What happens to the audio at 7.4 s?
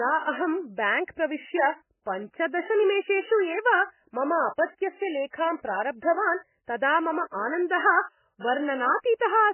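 At 7.4 s the speech sounds watery and swirly, with a dull, muffled top end: there is nothing above 3 kHz, so sibilants lose their edge and turn into smeared, chirpy fragments. The damage is heavy and runs through the whole clip. The likely cause is MP3 compression at a very starved bitrate, around 10 kbps. The encoder cuts the treble at a fixed point and drops weak frequency lines that flicker in and out between frames.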